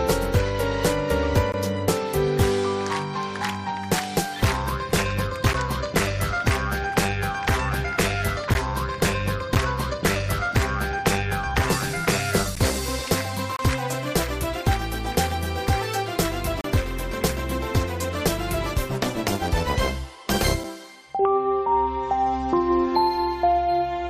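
Gaps between stream segments at 1.52, 5.53, 8.54, 9.55, 12.55, 13.56 to 13.59 and 16.61 to 16.64 s: segment timestamps fail to meet, so hard-edged silences of 9 to 33 ms interrupt the sound at one-second segment boundaries.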